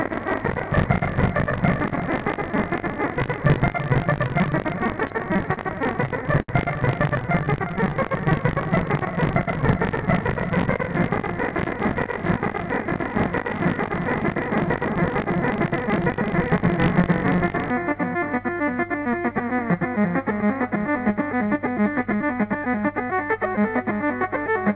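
From the start until 17.70 s there is buffer tearing: the writer and the reader of the playback ring buffer have drifted out of step and cross inside every period, so about a fifth of each buffer replays sound from one lap earlier, roughly 40 ms old. Each splice leaves a hard edge on both sides. The result is a steady robotic buzz at 50 Hz, which fits a 20 ms buffer, riding only on the sound itself. A spectrogram shows thin vertical striations every 20 ms and a comb of 50 Hz sidebands, all sitting under the 4 kHz ceiling of the G.711 call path.

Two bursts of repeated stalls (stutter) follow, from 5.00 to 5.60 s and from 6.05 to 6.51 s. In each, packets arrived late and the jitter buffer kept running dry, so the receiver extended the last sound until data returned. The first burst has five short gaps, the longest 40 ms, filling 92 ms, about 15% of the span. The second has four gaps, the longest 72 ms, filling 100 ms, about 22%. 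No sound is lost, but it catches and drags. On the waveform, short stretches repeat the preceding cycles, and the longest fill decays in level.

From 7.22 to 8.08 s a jitter buffer slow-down adds 80 ms by repeating single pitch periods over and over. The sound plays at about 91% speed at unchanged pitch and comes across as drawn out. A spectrogram shows the events stretched in time while their harmonic spacing stays the same.

From 10.66 to 11.94 s a jitter buffer speed-up does the reverse. The buffer held too much, so the receiver cut short pitch-period pieces, about a tenth of a second in all. Playback runs at about 107% with the pitch held, so it sounds hurried. The waveform shows events compressed in time, with small joins where pieces were removed.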